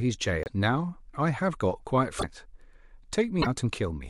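Speech, where the likely cause is a broken MP3 bit reservoir: frames were dropped from the stream, so the frames after each cut reached back for borrowed data and decoded bytes from the wrong frame. Each event jumps the speech ahead and leaves a brief glitch, about two 26.1 ms frames long, at 0.43–0.49 s, 2.18–2.24 s and 3.41–3.47 s.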